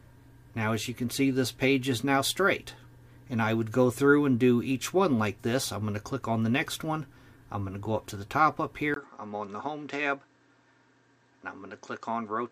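At 8.94 s the sound abruptly turns duller and about 5 dB quieter after a gap of about 20 ms, and stays that way to the end. This is likely an input switched to a poorer device. The replacement path passes nothing above 8.1 kHz and brings faint new background noise, roughly 45 dB below the signal. A spectrogram shows a sharp ceiling at 8.1 kHz from the switch onward and a thin vertical gap at 8.94 s. The waveform's envelope steps down at that point.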